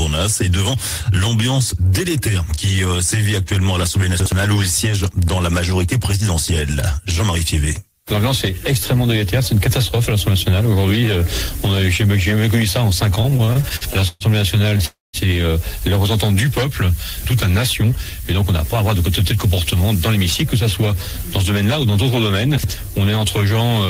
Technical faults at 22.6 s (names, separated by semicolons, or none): chunks out of order